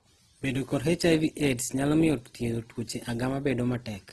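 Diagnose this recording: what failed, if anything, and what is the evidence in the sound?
The failure sits at the codec stage, and it runs through the whole speech clip. The sound is rough and grainy, with harmonics smeared into a noisy texture rather than swirling, and nothing is present above about 12.4 kHz. That points to Opus compression, likely in its music-oriented CELT mode at a low rate, which fits roughly 16 kbps. Short of bits, the encoder preserves each band's energy but fills the detail with folded or noise content, and the damage is plainly audible.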